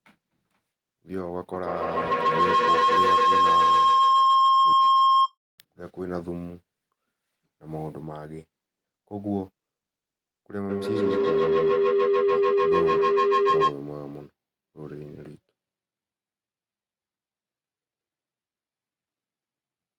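Speech with two bursts of feedback howl, 1.53–5.37 s and 10.69–13.8 s, tones near 1 kHz then 400 Hz, pulsing about every 150 ms and peaking about 12 and 10 dB above the voice. Unlike echo, each repeat grows rather than fades.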